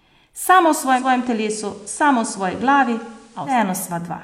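Speech with digital radio blending to analogue from 0.92 s to 3.60 s. The receiver cross-fades to FM over 155 ms. Level drops about 2 dB. Faint hiss rises, roughly 35 dB below the speech.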